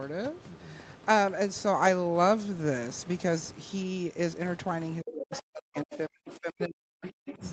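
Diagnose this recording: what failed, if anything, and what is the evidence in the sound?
The failure sits in the call processing stage, in the echo canceller. From 5.01 to 7.43 s the speech is repeatedly pushed down. The affected parts add up to about two seconds. The deepest drops reach around 40 dB. This is likely speech suppressed in double talk. Sound from the far side was playing on the loudspeaker while this side talked. The canceller could not separate the local talker from the echo, so it attenuated both.

The same stage also lets the other side's voice leak through. It appears in four brief scraps, at 5.34 to 5.42 s, 5.91 to 5.97 s, 6.28 to 6.33 s and 7.30 to 7.34 s. Each sits roughly 15 to 25 dB below the speech, and the last is the quietest. The likely cause is an echo canceller that did not fully remove the loudspeaker signal from the microphone. The residue then passed into the call. 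The band ends at 8 kHz, as expected from call microphone processing.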